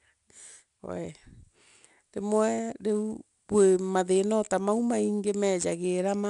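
From start to finish the speech carries 4-bit ADPCM compression, and the damage is plainly audible. Each sample is coded as a coarse 4-bit step from a predicted value, with the step size adapting to the signal, so the coding error rises and falls with the speech level and comes through as a gritty hiss on the louder passages. Nothing is present above about 10.6 kHz, which points to a sample rate near 22 kHz and a stream of roughly 88 kbps.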